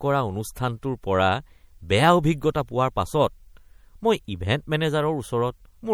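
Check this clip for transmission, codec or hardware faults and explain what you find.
One codec fault is plainly audible across the whole speech clip. MP3 compression throughout, likely near 64 kbps: weak frequency lines flicker on and off frame to frame, giving a watery swirl that a steady low-pass filter lacks.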